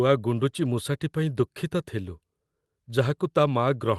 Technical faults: none

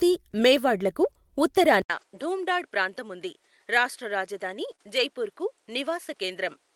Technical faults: input switched to a poorer device; lost packet rebuilt from error correction; short concealed packet loss

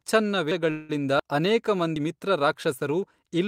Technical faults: dropped buffer (overrun); call audio freeze

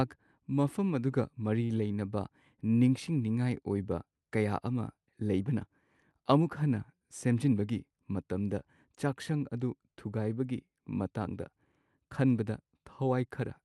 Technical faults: short stall from a late packet; jitter buffer speed-up

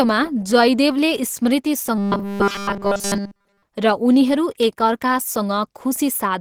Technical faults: Opus compression; robotic sound from repeated short buffers

